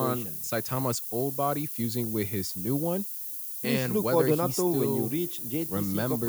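Speech, quantised throughout at low bit depth with noise shaping: the samples are held to what sounds like just 5 bits, and the rounding error is fed back so that it is pushed up out of the lower band and piled toward the top. The result is a constant thin, bright hiss that climbs steeply in the high frequencies and sits only a few decibels below the speech, so it never drops away between phrases.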